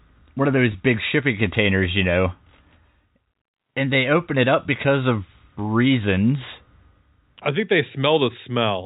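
At 0.72 to 0.74 s, between "one of" and "big shipping containers you", a packet loss with pitch repetition fills the gap, consistent with one 20 ms packet, by repeating the last pitch period, briefly holding the sound as a buzzy note.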